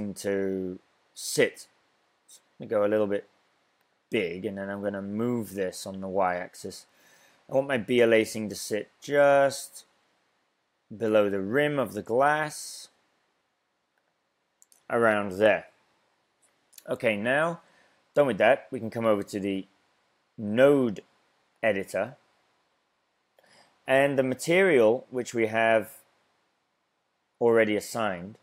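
No technical faults are audible.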